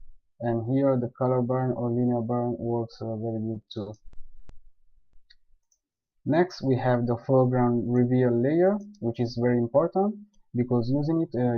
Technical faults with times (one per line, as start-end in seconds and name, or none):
3.53-4.51 repeated stalls (stutter)
4.97-5.15 call audio freeze
5.87-6.14 call audio freeze
9.37-11.58 jitter buffer speed-up